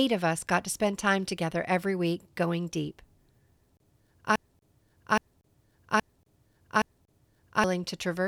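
At 4.36 s the playback or stream most likely stalled and kept resending the last fragment it held, producing a broken-record loop: a 0.82 s stretch of speech repeats exactly, four times back to back, until 7.64 s, and whatever should have followed is missing.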